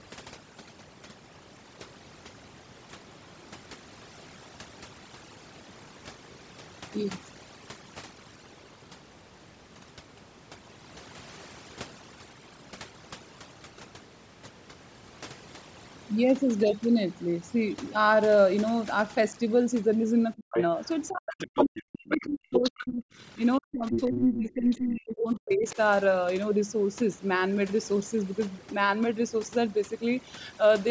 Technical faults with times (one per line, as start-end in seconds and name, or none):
0.00-30.90 overdone noise removal
20.36-20.57 speech suppressed in double talk
20.56-20.89 other side's voice leaking through
21.09-23.04 speech suppressed in double talk
21.39-22.71 other side's voice leaking through
23.58-25.77 speech suppressed in double talk
23.91-24.17 other side's voice leaking through
24.70-24.77 other side's voice leaking through